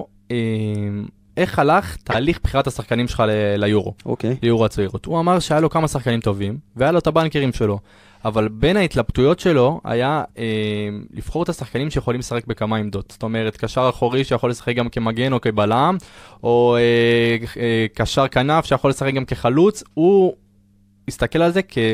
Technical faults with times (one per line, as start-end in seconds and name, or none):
2.11-2.15 corrupt frame decoded